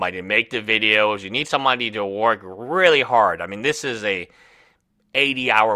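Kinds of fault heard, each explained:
Clock slip clicks: faint ticks about once a second, roughly seven in all, likely from two unsynced clocks drifting around 20 ppm apart, dropping or repeating single samples.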